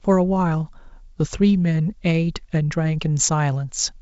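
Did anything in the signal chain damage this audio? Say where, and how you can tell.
No, the speech has passed through G.722 wideband telephone coding at what sounds like 64 kbit/s, with the band stopping at about 7.7 kHz as that codec's top band should, and no stage in the chain has left audible damage.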